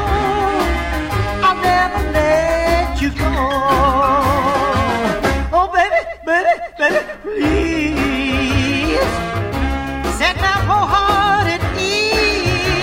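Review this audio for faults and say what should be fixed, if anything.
Nothing here needs fixing, so you can leave it as it is.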